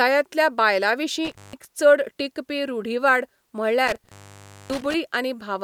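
Speech with an intermittent contact fault, where a loose cable or plug opens briefly. The sound drops out twice, with crackle at the edges. The first dropout runs from 1.25 to 1.65 s, opening for about 165 ms, just before "चड टिकपी रूढिवाद". The second runs from 3.87 to 4.94 s, opening for about 584 ms.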